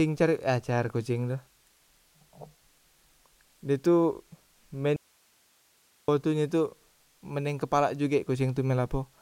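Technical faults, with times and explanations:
4.96 to 6.08 s, audio dropout to a faint residue: the speech cuts off abruptly for about 1.12 s, leaving only hiss far below the speech level, then returns mid-flow. The likely cause is the signal being lost upstream while the path after the break stayed live.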